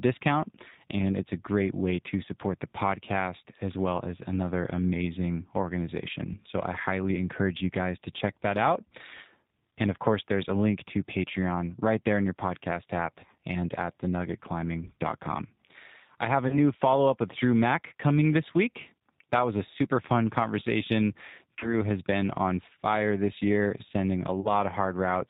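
Throughout, the speech passes through the G.729 codec at 8 kbit/s. It rebuilds each 10 ms frame from a vocal tract filter, a pitch predictor and sparse pulses, and cuts everything above 4 kHz. The result is plainly audible: a dull, slightly rough, synthetic voice.

VoIP packet loss concealed by the speech codec occurs three times. Each is a dropout of about 30 ms, which fits a single lost packet, and the decoder fills it by extending its last pitch and filter with falling gain. The first runs from 16.48 to 16.58 s, after "I have a" and before "follow up with". The second runs from 21.59 to 21.74 s, after "a super fun conversation" and before "has been on fire". The third runs from 24.41 to 24.48 s, after "fire this year sending". Each time the sound smears into a brief buzzy tone or coloured noise that fades, and the voice stays weak for a moment afterwards as the decoder recovers.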